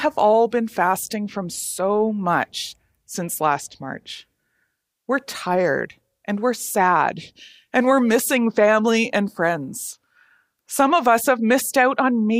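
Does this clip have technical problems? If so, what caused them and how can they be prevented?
No, no faults are audible.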